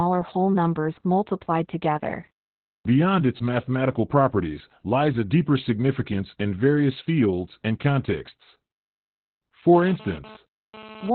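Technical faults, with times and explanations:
Throughout, Opus voice compression. The speech is squeezed into a narrow band with nothing above about 4.2 kHz, so it sounds muffled and phone-like. The SILK coder is working at a rate that fits about 8 kbps. At that rate it describes the excitation only coarsely. The voice therefore comes out hoarse and slightly robotic. The damage is heavy, and it stays the same across the whole clip.
9.74 to 11.10 s, GSM phone buzz. A hard, raspy buzz enters about 18 dB below the speech and runs almost to the end. It repeats at 216.7 Hz, close to the 217 Hz burst rate of a 2G phone. The audio circuit is rectifying the radio pulses, and that produces the buzz and its many harmonics. The buzz has no relation to the speech. Its short appearance points to a data transfer rather than a call.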